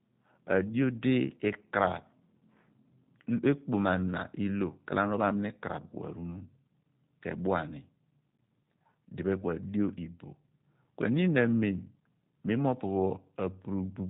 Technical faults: G.729 codec

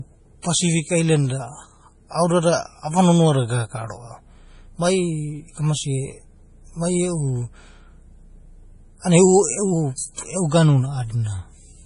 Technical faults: MP3 compression; pre-echo

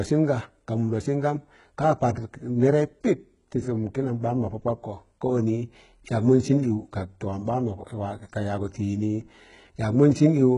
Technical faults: HE-AAC compression

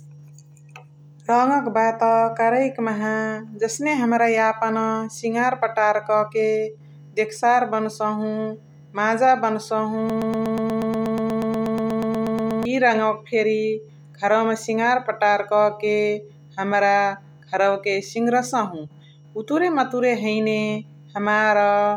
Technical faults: broken-record loop

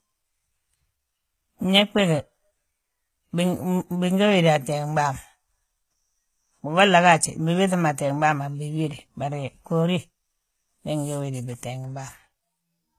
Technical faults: HE-AAC compression; pre-echo

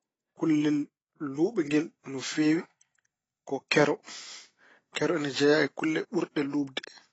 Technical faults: AAC compression

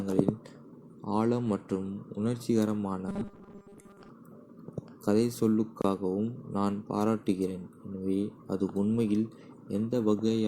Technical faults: robotic sound from repeated short buffers; gap at a join of encoded pieces

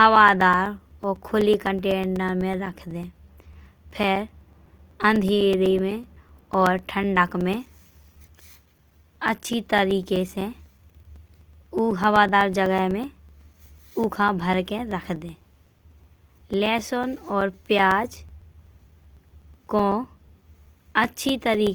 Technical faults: Opus compression; periodic USB or driver dropouts

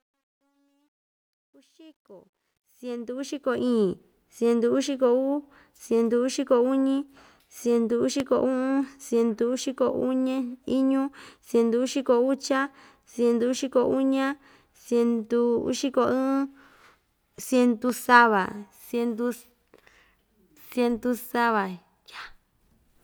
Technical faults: truncation distortion on a fade; loud pop

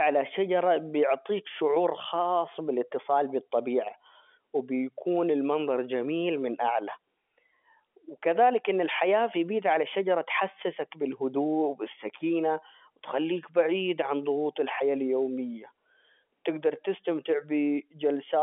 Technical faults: none

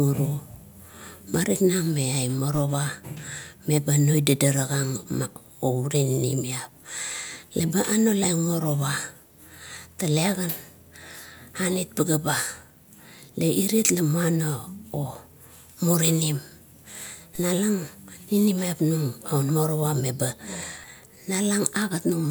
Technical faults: DC step

